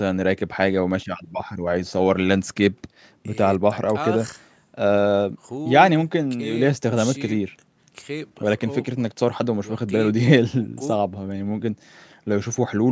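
No technical faults can be heard anywhere in the speech. The call microphone processing is working as intended, trimming away the lowest bass and leaving nothing above 8 kHz.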